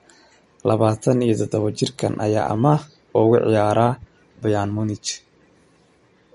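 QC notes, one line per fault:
Throughout: MP3 compression, likely the cause of the damage here. Nothing survives above about 11.2 kHz, so the top end of the speech sounds dull and clipped off, and the compression damage is plainly audible, with that watery, swirly texture around the edges. The sound points to a low bitrate, around 48 kbps. Starved of bits, the encoder chops the treble and lets weak detail flicker in and out from frame to frame.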